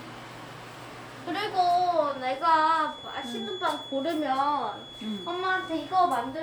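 A recording of everyday sounds carrying a feedback whistle from 1.99 s to the end: a steady 3.4 kHz tone roughly 15 dB below the signal. On a spectrogram it forms a thin horizontal line, likely from a speaker-to-microphone loop sitting at the edge of feedback.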